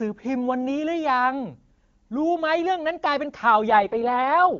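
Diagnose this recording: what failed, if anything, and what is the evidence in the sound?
An AMR rate drop at the network and codec stage begins at 3.68 s and runs to the end at 4.60 s. Before that the AMR wideband (HD Voice) speech is clean, and afterwards it turns rough and synthetic, which fits the link forcing the codec down from 23.85 to 6.6 kbit/s. On a spectrogram the band edge stays near 7 kHz and the waveform shows no gap, but harmonics blur into coarser, noisier texture.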